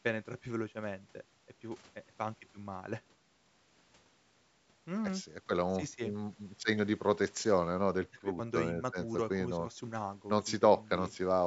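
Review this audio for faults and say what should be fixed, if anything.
Nothing here needs fixing: the speech has simply passed through a call's microphone processing, which trims away the deepest bass, and that's just how that kind of path sounds.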